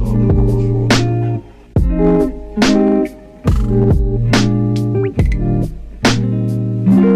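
No technical faults can be heard anywhere in this audio. Nothing in it calls for a timestamp or a note of any disturbance.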